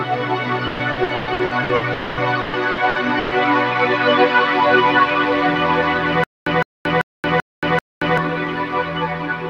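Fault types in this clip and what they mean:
noise suppressor applied to music or sounds: throughout, a speech noise suppressor treats held tones and tails as noise, so level swings by roughly 5 dB and the sound pumps, flutters or thins out.
repeated packet loss (robotic sound): from 0.67 to 1.84 s and 2.41 to 3.34 s, repeated gaps up to 120 ms are patched by repeating sound, giving choppy stretches with pieces missing.
long network dropout: from 1.93 to 2.20 s, the last sound is stretched into a fading buzz or hiss for about 240 ms, likely because no audio arrived during that time.
stutter with silent gaps: from 6.24 to 8.18 s, a 160 ms burst repeats five times every 390 ms with 230 ms of silence between, likely a stalling player retrying.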